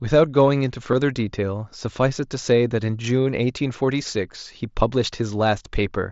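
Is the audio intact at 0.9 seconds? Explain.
No. At 0.92 s there is concealed Bluetooth headset packet loss. A single voice packet between headset and phone went missing, about 7.5 ms of audio, and the receiver filled the gap by repeating the best-matching recent stretch of waveform. The patch is nearly inaudible.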